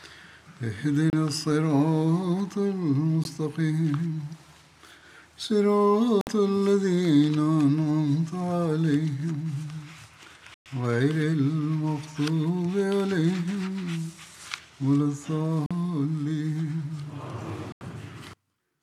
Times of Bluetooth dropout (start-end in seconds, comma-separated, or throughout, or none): 1.10-1.13, 3.24, 6.21-6.27, 10.54-10.66, 15.66-15.71, 17.72-17.81